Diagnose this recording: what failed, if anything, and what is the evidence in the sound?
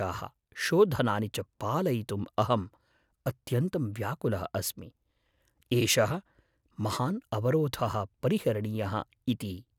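Nothing in the recording points to a failure at any stage of the chain: the speech signal stays continuous and intact, with no audible disturbance to its level, timing or frequency content.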